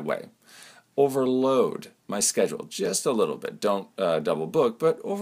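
Nothing is technically wrong with the audio.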